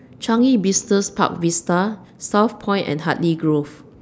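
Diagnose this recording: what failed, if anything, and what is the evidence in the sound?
From 0.39 s to 1.38 s the speech slows by about 5.9% and drops about a semitone (104 cents), then snaps back to normal. This points to a drift correction step at the buffer stage, likely a clock-matching resampler abruptly changing rate. Unlike wow, the shift is a single flat step with sudden edges, and speed and pitch move together.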